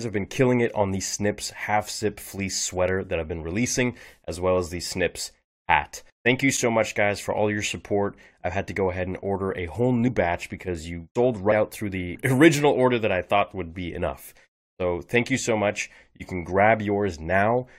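At 10.07 s and 11.51 s the speech jumps ahead, around 70 ms and then 100 ms, a few compressed frames skipped each time.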